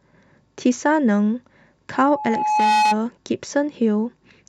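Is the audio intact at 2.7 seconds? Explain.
No, 2.7 s sits inside a loudspeaker feedback squeal running from about 1.93 to 2.98 s. The mic is picking up its own speaker, and an 851 Hz tone feeds on itself, swelling over most of a second into a howl roughly 5 dB above the speech.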